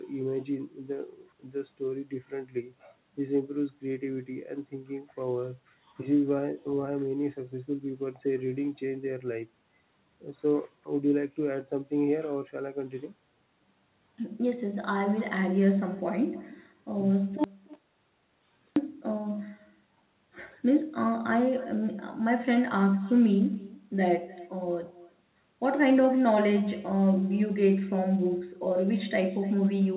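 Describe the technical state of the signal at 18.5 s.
At 18.5 s you're inside an audio dropout to silence, running from 17.44 to 18.76 s: about 1.3 s of silence with no room tone, likely from the input briefly disconnecting or muting. Around that gap there's also echo with no canceller, where the far end's loudspeaker feeds back into its mic and returns the talker's voice about a third of a second late, roughly 23 dB down and thin.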